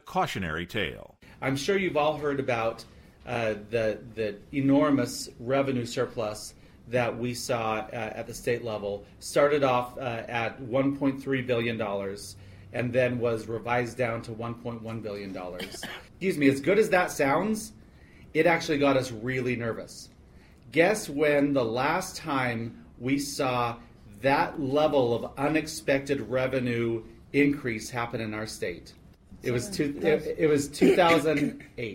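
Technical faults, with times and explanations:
No technical faults can be heard anywhere in this recording. Nothing in the audio calls for a time or an explanation.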